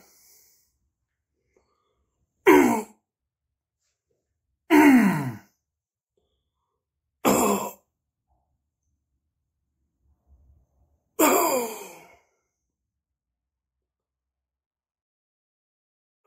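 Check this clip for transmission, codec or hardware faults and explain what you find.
No transmission, codec or hardware faults can be heard in the clip. The level fades out smoothly over the last few seconds, from around 12 s to the end, with no click or hard edge, as an editor would shape it.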